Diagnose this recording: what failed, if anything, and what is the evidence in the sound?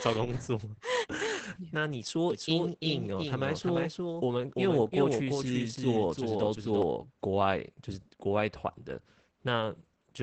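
The codec stage failed throughout. The speech is muffled, hoarse and slightly robotic for the whole clip. Nothing reaches above 8 kHz, which points to wideband Opus voice compression. The graininess fits the SILK linear-prediction coder at a low bitrate, around 12 kbps. At that rate the encoder codes the excitation coarsely. Fine vocal texture is replaced by a buzzy approximation, and sibilants lose their top.

From 2.30 s to 6.82 s there is a doubled audio track. A full-band copy of the speech trails the original by roughly 300 ms. It sits about 5 dB quieter. It has no decay and no room colour, so it is not reverberation. It starts and stops abruptly at those times. The likely cause is a second, slower capture path being mixed in, or an edit that left two copies out of step.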